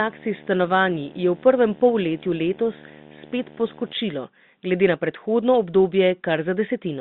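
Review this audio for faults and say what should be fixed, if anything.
Video or display buzz runs from 0.0 to 3.93 s. A screen or its video cable couples into the audio path, leaving a 75 Hz buzz at the picture's field rate with hash layered above it, roughly 20 dB below the speech. Mains hum sits at 50 or 60 Hz and lacks that gritty upper hash, so this is not hum. Routing audio cables away from the display and its video lead, and giving both a single common ground, would prevent it.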